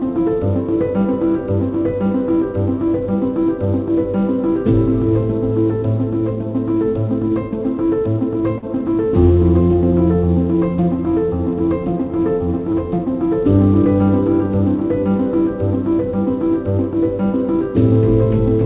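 At 8.58 to 8.64 s and again at 12.72 to 12.76 s there is short concealed packet loss: about 40 ms and then about 20 ms of audio never arrived in time, and the receiver extended the preceding sound before blending back in. Each is heard as a brief smear or wobble. Unlike a plain dropout, there is no silent hole, only a filled, slightly wrong stretch, set against the call path's 4 kHz ceiling.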